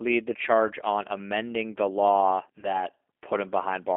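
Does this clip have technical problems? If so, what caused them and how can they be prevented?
Yes. The call was carried by the G.729 codec at 8 kbit/s, which does not send the waveform itself. It sends a vocal tract filter, a pitch predictor and a few pulses per 10 ms frame, and the far end rebuilds speech from those. Only about 250 Hz to 3.5 kHz survives the line, so the speech sounds narrow and muffled, and the coding damage is plainly audible as a rough, slightly synthetic texture throughout. Using a wideband codec such as G.722 or Opus would prevent this.

The second fault is VoIP packet loss concealed by the speech codec, from 2.60 to 2.82 s, just after "on amending the law". About 30 ms of audio never arrived, which fits three lost 10 ms frames. The decoder filled the gap by extrapolating from its last pitch and filter settings with falling gain, so the sound smears into a buzzy tone or coloured noise that fades. 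Because each frame is predicted from the previous one, the distortion lingers well past the lost 30 ms. A jitter buffer with forward error correction, or a more reliable network path, would prevent it.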